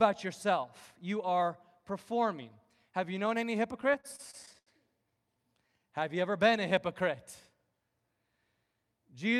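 Speech that hitches and drags from 3.81 to 4.69 s after "you known any", a dozen brief held-sound stalls (stutter) from late packets draining the jitter buffer.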